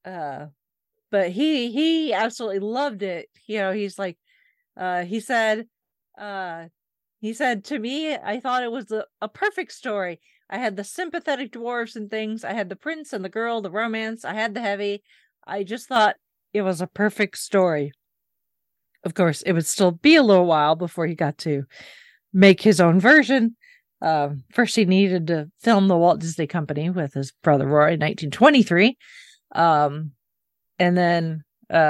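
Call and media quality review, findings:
Sudden gain jump, 6.2 to 6.72 s: digital gain likely stepped down about 6 dB with no ramp, then back up. Speech and background noise drop together for about half a second, with abrupt edges.

Sudden gain jump, 15.96 s to end: gain likely stepped up about 6 dB sample-to-sample, no smoothing. Speech and noise floor jump louder together and stay raised for the rest of the clip.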